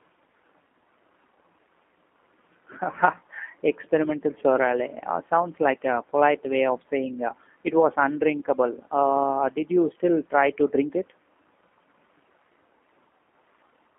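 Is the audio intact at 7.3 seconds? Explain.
No. At 7.3 seconds, as across the whole clip, the speech has passed through a G.729 codec, which rebuilds it from a vocal tract filter, a pitch predictor and a few pulses per frame within a 250 Hz to 3.4 kHz line band. The result sounds thin, rough and plainly synthetic, consistent with an 8 kbit/s stream.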